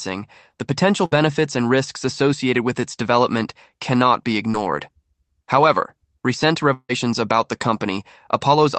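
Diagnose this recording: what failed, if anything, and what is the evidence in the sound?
Burst of packet loss at 1.05 to 1.13 s, a network-stage fault. Several consecutive packets failed to arrive in time, so the receiver extended the last speech sound for about 60 ms as a held, fading buzz or hiss. Speech then resumes with 60 ms missing.

Short concealed packet loss at 4.51 to 4.56 s, also at the network stage. About 20 ms of audio never reached the decoder in time. The receiver patched the hole by continuing the preceding sound for about 22 ms, heard as a brief smear or wobble before blending back.

Long network dropout at 6.74 to 6.91 s, with a network stall as the likely cause. The receiver stretches the last sound into a fading buzz or hiss for about 150 ms, and about 50 ms of silence is left. Speech returns with 160 ms lost.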